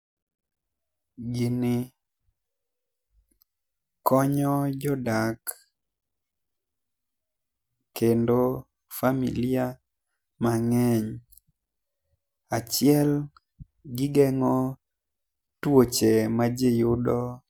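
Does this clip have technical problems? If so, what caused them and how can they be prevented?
No, there's nothing technically wrong to hear in this speech recording, so there's no cause to track down and nothing that needs preventing.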